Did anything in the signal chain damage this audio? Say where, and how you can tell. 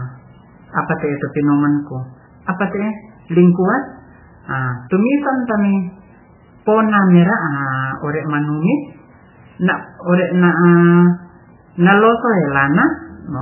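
Yes, at the codec stage: heavy watery swirl and nothing above 3 kHz throughout point to likely MP3 compression, starved at around 8 kbps.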